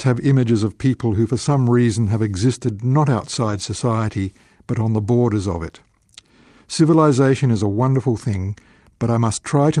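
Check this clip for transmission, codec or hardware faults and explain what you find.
Two short stretches of this speech clip show a lost packet rebuilt from error correction, once from 1.45 to 1.55 s (after "of people who for") and once from 3.35 to 3.65 s (after "reason have existed not"). Lost packets were replaced by the low-bitrate copy carried in the following packets, so nothing drops out. Those frames sound grainier and hissier. On a spectrogram they show as blurred, smeared bands. The waveform stays continuous.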